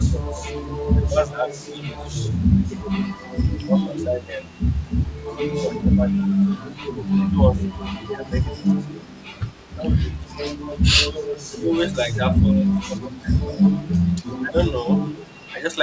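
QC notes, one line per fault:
0.0–2.1 s and 3.84–14.7 s, speech suppressed in double talk: the speech dips in patches, about 0.7 s in all early on and around 3 s later, dropping up to about 10 and then 15 dB. That's likely an echo canceller ducking the talker while the far side spoke.
2.39–2.8 s, 6.92–9.08 s and 13.19–15.48 s, echo leak: a faint delayed copy of the speech trails it by 0.31 s, sitting about 30 to 35 dB under the speech. Most likely the far end's echo canceller let some loudspeaker pickup slip back into the call.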